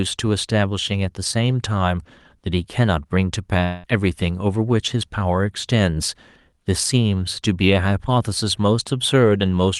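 From 3.63 to 3.86 s the speech breaks off and about 200 ms never returns, which points to a likely long network dropout. The receiver bridges the whole gap with a fading synthetic buzz, leaving no true silence, and speech resumes past the lost section, its band-limited call-codec sound consistent with Opus.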